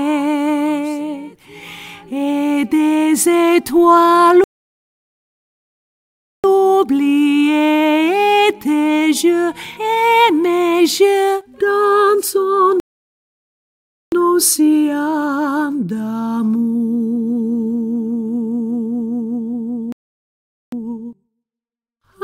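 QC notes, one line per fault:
4.44–6.44 s, 12.80–14.12 s, 19.92–20.72 s: playback stall. The sound halts mid-flow for 2.0 s, 1.3 s and 0.8 s, likely from the player starving for data. These are long, dead silences, unlike millisecond dropouts.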